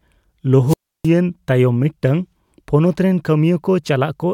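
At 0.66 s, the radio signal from the wireless microphone fades far enough that the receiver's squelch mutes its output, a wireless microphone squelch dropout. A short burst of hiss gives way to 0.31 s of near silence, and speech resumes at 1.09 s with "ᱛᱟᱭᱚᱢ ᱢᱤᱫᱴᱟᱝ ᱯᱚᱱᱚᱛ".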